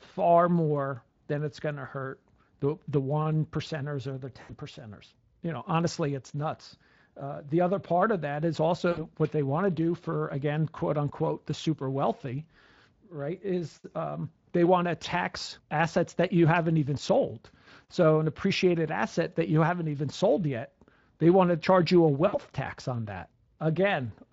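VoIP packet loss concealed by the speech codec occurs at 4.41–4.52 s, 8.91–9.06 s and 22.27–22.39 s. The Speex decoder fills each gap by repeating its last pitch, giving a brief buzzy or noisy, fading smear.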